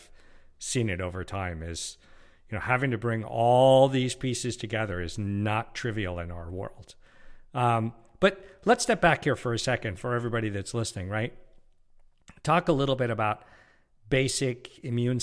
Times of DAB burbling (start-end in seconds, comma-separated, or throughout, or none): none